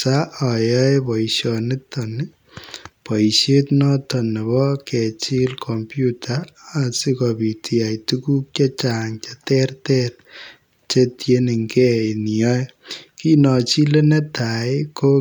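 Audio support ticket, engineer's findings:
No audible faults found on playback; nothing to action.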